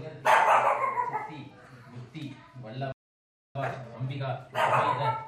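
The player was likely starved of data or blocked at 2.92 s, a playback stall: the output falls silent for about 0.63 s, resuming at 3.55 s. Working off the resulting backlog, the player applies time-compressed catch-up from 3.55 s to the end, splicing out small pieces so the audio runs about 1.15 times fast at unchanged pitch.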